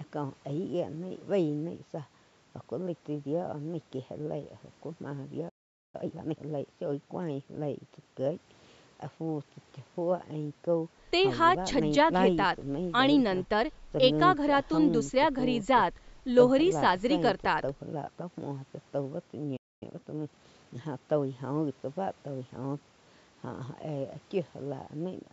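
At 5.49 s the speech goes silent for about 0.45 s, and again at 19.56 s for about 0.25 s. This is a playback stall, likely the player starving for data. Each stall is followed by a time-compressed catch-up: from 5.95 to 6.39 s the speech runs at double speed, and from 19.83 to 20.81 s at 1.25 times. The pitch stays normal, which separates this from a simple speed-up.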